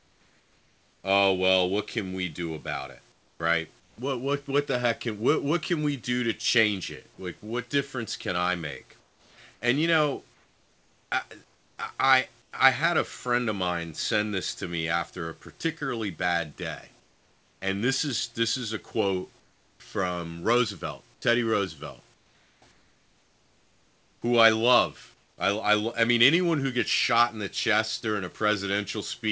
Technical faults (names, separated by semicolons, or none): comfort noise in place of the background